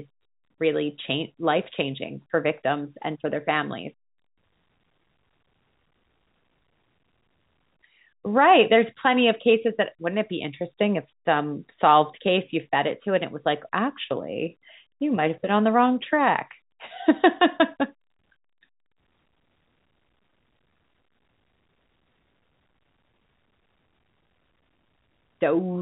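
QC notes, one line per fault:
Nothing stood out on listening to this speech, which has the narrow bandwidth expected of G.711 telephone coding.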